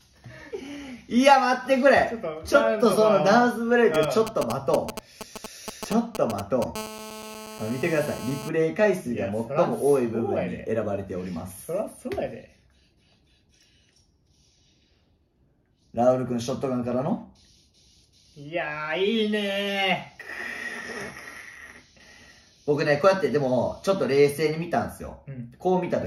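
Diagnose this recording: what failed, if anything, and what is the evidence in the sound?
The failure is in the analogue wiring, as GSM signalling bursts from 3.94 to 6.64 s: a galloping dit-dit-dit of brief raspy buzzes at about 217 Hz, only a few dB below the audio. A nearby 2G phone was exchanging short radio bursts with its network, and the audio circuitry rectified them. Unlike mains hum, it is intermittent and gated in groups rather than continuous, and it has no 50 or 60 Hz fundamental.

Directly after, from 6.76 to 8.49 s, it becomes a GSM phone buzz: a hard, continuous buzz at about 217 Hz, dense with harmonics, about 14 dB below the audio and unrelated to it. The phone has moved into a call and transmits its bursts steadily, 217 times a second, which the same analogue circuitry rectifies. The unbroken buzz at an unchanging pitch separates this from the preceding signalling bursts and from codec or network artefacts, which follow the content.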